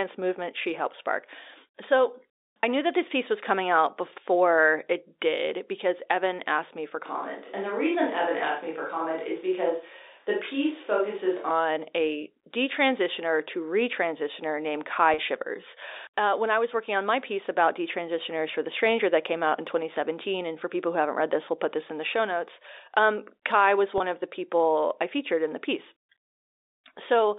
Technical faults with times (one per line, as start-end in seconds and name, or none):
2.62 packet loss with pitch repetition
7.06-11.51 switch to a distant microphone
15.14-15.18 packet loss with pitch repetition
23.98-24.00 packet loss with pitch repetition